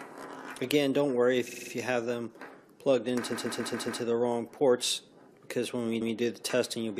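At 1.48 s the audio starts to stutter with repeated frames. A 46.4 ms block plays five extra times, to 1.71 s. That fits a couple of compressed frames being sent again. From 3.31 to 4.01 s, a 139.3 ms block repeats five more times and adds about 0.7 s. At 6.00 s, that length plays once more, ending at 6.14 s.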